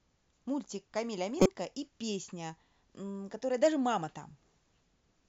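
A short glitch, heard as a chirp, squeak, blip or burst of noise, cuts through the speech from 1.37 to 1.46 s and peaks around -10 dBFS. This is a corrupt frame decoded: bits inside a few consecutive compressed frames were damaged, yet the decoder played them as if valid. The misread gains and codes scattered energy into the wrong frequencies, so for those roughly 90 ms the output is spurious sound rather than speech.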